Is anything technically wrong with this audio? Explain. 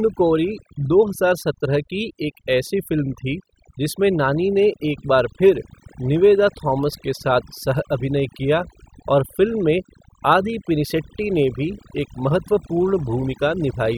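Yes. Throughout the speech, the pauses drop to near silence with twinkling specks. This is overdone noise removal: the reduction was set so hard that bands close to the noise estimate were cut away, taking the voice's quieter detail with them.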